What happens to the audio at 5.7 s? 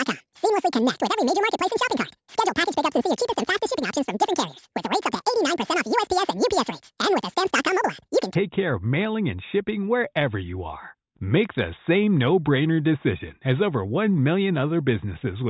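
At 5.7 s the audio sits inside a wrong sample rate span from 0.0 to 8.35 s: samples recorded at 8 kHz play at 16 kHz unconverted, so speech runs twice as fast and a full octave high.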